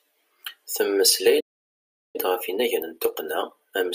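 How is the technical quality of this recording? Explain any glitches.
Two linked playback faults disrupt the speech. A playback stall runs from 1.40 to 2.16 s: the player likely ran out of buffered data or was blocked, so the speech cuts to silence for about 0.74 s. Time-compressed catch-up follows from 2.16 s to the end, as the player trims its backlog by splicing out short pieces; the speech runs about 1.1 times fast at normal pitch.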